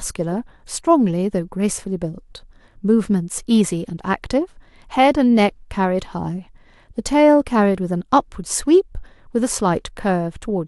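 Nothing stood out on listening to this speech recording.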